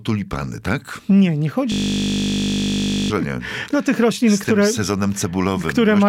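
From 1.72 to 3.1 s, the system froze while the sound hardware kept replaying one 20 ms stretch of its ring buffer, a system hang loop. That slice repeats about seventy times as a steady 50 Hz buzz, and roughly a second and a half of audio is lost.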